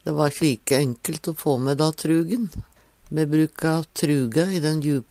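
Clock drift between sender and receiver runs through the whole clip. The sender's clock is about 1.5% slower than the receiver's, so the jitter buffer keeps draining and the receiver has to stretch the incoming audio to avoid running dry.

Repeated timing corrections follow from 0.62 s to 4.95 s. The receiver repeats short pieces to stay in step, adding roughly a tenth of a second in total. This slows playback to about 98% speed, heard as small, unevenly spaced hiccups and a slightly unsteady tempo.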